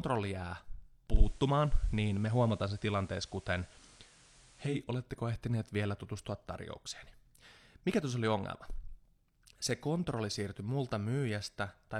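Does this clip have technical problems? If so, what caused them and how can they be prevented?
Yes. From 1.08 to 4.83 s the receiver lost digital reception and blended to analogue FM, adding hiss and shifting level about 1 dB. Better antenna placement or a stronger digital signal prevents this blend.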